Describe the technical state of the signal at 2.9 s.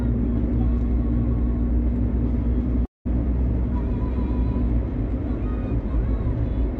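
A long network dropout covers 2.9 s, running from 2.85 to 3.07 s. The sound is cut off, and what came just before is stretched into a buzzy, hissing tail that fades out, leaving roughly 170 ms of near-silence. That is likely a run of lost packets, about 200 ms of audio that never arrived, which the receiver concealed by extending the last sound. When the audio resumes, the missing stretch is gone. The surrounding band-limited call sound, topping out near 8 kHz, fits an Opus path.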